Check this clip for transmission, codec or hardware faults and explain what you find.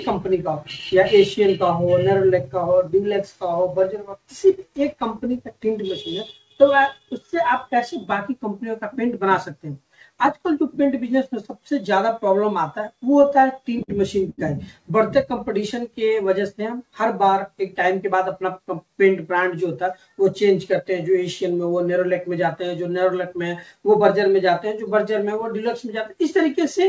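Three network-timing faults are audible, all from the jitter buffer; the audio passes through a G.722 call codec, which fits the absence of anything above 8 kHz.

Repeated stalls (stutter), 13.13 to 13.91 s: packets arrived late or more slowly than playback, so the buffer emptied seven times. Each time the receiver extended the last sound, about 110 ms in all, with the longest fill 51 ms, roughly 14% of that span. Nothing is lost, but the sound drags and hiccups. On a spectrogram, short smeared, repeated-looking blocks interrupt the normal texture. The waveform shows brief held segments with soft dips in level.

Short stall from a late packet, 14.30 to 14.41 s: one packet was not there when it was due. The receiver held the preceding sound for 76 ms, then resumed from the same point, pushing the playout delay up by the same amount. The ear hears one sound lingering too long, with a faint buzz or sag. 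A spectrogram shows a horizontally stretched, slightly blurred patch. The waveform shows a repeated periodic stretch that tapers a little in amplitude.

Jitter buffer speed-up, 17.94 to 18.60 s: the buffer held more audio than its target, so the receiver trimmed short pitch-period pieces repeatedly, removing roughly 40 ms. Playback runs at 106% speed with unchanged pitch, sounding slightly rushed. On a spectrogram, harmonics keep their spacing while events sit closer together in time. The waveform looks compressed horizontally, with tiny splice points between cycles.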